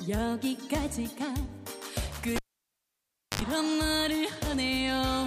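A live cable was pulled out and plugged back in between 2.36 and 3.42 s. At 2.36 s a pop cuts the audio, and about 1 s of near silence follows while the connection is open. As the plug goes back in, only the tip touches at first, so for about 71 ms a 50 Hz mains buzz comes through before the sleeve connects, a second pop sounds and the signal returns at 3.42 s.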